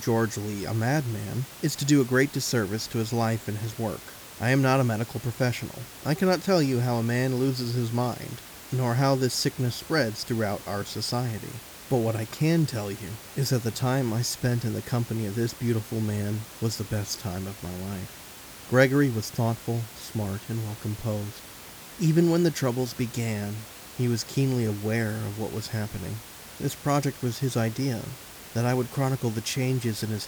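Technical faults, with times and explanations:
Nothing stood out on listening to this speech clip; the only thing beneath it is the room's own background noise, sitting about 18 dB below the speech.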